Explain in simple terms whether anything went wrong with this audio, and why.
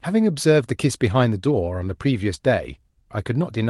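Nothing went wrong: the speech came over a normal internet call link that was working as designed and carries sound up to about 12 kHz, so the slightly softened top end is simply how that link sounds.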